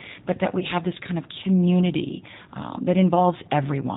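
The whole speech clip carries G.729 codec damage. Nothing above 4 kHz survives, and the voice sounds rough and synthetic, which fits an 8 kbit/s coder.

From 0.59 to 0.65 s, between "but that" and "have this kind of", VoIP packet loss concealed by the speech codec appears. Roughly 20 ms went missing, likely one packet. The decoder stretched its last frame into a brief fade, and the voice stays weak until it recovers.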